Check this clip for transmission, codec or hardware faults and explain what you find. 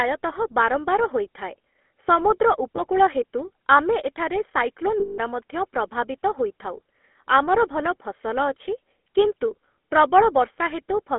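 Two faults are present: GSM full-rate coding across the whole clip, and two bursts of lost GSM frames.

GSM full-rate codec, throughout. The speech is confined to a telephone band of roughly 250 Hz to 3.4 kHz, and the coding damage is plainly audible. The codec rebuilds the voice from a vocal-tract model driven by a sparse, regularly spaced pulse excitation, which fits the 13 kbit/s full-rate coder. The result is a buzzy, gravelly roughness on voiced sounds. That grain separates it from simple band-limiting, which only muffles the sound without adding texture.

Lost GSM frames, at 2.76 to 2.82 s and at 5.00 to 5.19 s. The first loss lasts 20 ms, which fits a single lost frame, and falls just before "ହେତୁ ଆମେ ଏଠାରେ". The second lasts 180 ms, which points to about nine consecutive frames. The decoder fills each gap by repeating the last good frame's settings. The speech therefore does not cut to silence. 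It smears into a brief rough, metallic ring. That held ring distinguishes this from a plain dropout or a click.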